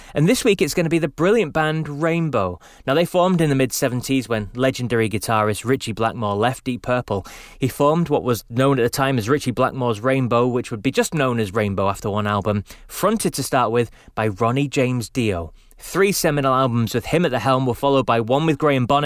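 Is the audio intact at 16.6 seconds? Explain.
Yes, the audio is intact at 16.6 seconds, with no fault audible at that moment.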